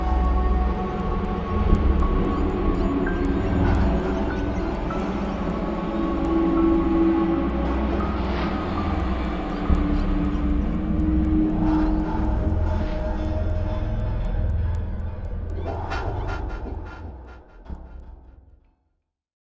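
From start to finish, a regular tick recurs four times a second, every 0.25 s. It rides on the sound and vanishes in the gaps. This is a resampler restarted on every block. Each 250 ms block was converted on its own, so the converter saw no real neighbouring samples at the block edges, which fits a 44.1 kHz to 16 kHz conversion.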